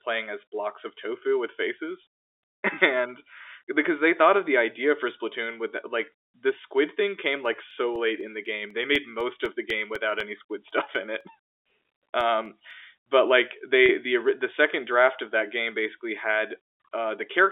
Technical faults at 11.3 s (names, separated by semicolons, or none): periodic USB or driver dropouts